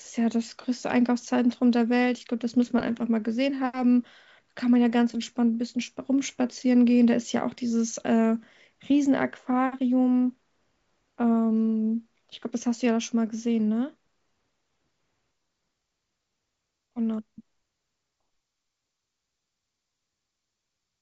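The speech carries no audible technical faults.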